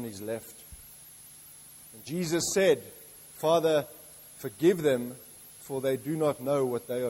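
From start to finish the audio carries low bit depth with dither: the signal is reduced to 8 bits, with random noise added before rounding. The quantisation error becomes a steady, even hiss roughly 30 dB below the signal, with no audible distortion.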